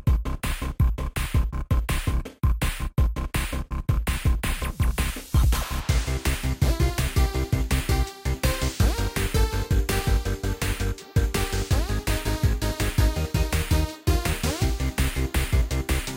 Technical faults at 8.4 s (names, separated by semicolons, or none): none